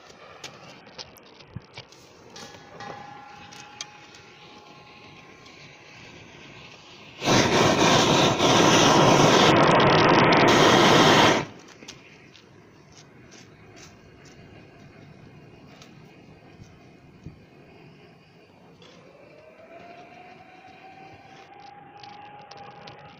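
At 0.80 to 1.89 s, 9.51 to 10.48 s, and from 21.48 s to the end, a Bluetooth SBC bit pool drop dulls the treble and adds a gritty, grainy noise floor. With fewer bits per frame, the encoder leaves the upper sub-bands empty and quantises the rest coarsely. The degree of loss points to the bit pool falling from about 31 to around 6, near 55 kbps, before recovering after the first two episodes.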